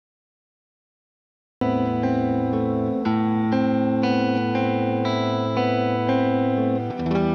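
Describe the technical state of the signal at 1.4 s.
At 1.4 s the signal is still inside a cut-off start, which runs from 0.0 to 1.61 s. Capture or streaming began late, so nothing was written for that stretch and the file holds pure digital silence rather than quiet room sound. At 1.61 s the audio switches on abruptly in the middle of a sound that was already underway, with no natural attack or fade-in, so the opening is missing and the entry feels chopped.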